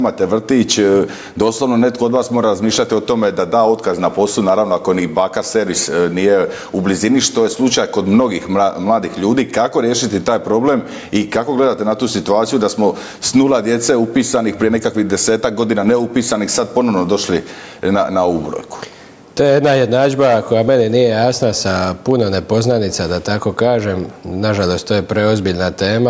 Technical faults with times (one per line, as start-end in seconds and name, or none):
0.00-26.10 gain pumping